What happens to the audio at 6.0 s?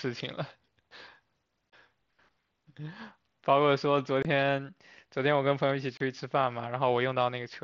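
At about 5.97 to 6.01 s, voice packets travelling between the Bluetooth headset and the phone were dropped, and nothing was done to conceal them: unconcealed Bluetooth headset packet loss. Roughly 30 ms of speech, which fits a run of about four lost mSBC packets, was replaced by silence or an idle pattern. The result is a short, hard-edged hole in the speech, with abrupt cut-off and restart edges that can click, rather than a smooth fade.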